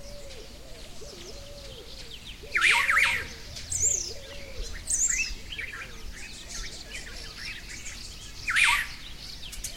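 There are no technical faults to describe in time order anywhere in this audio.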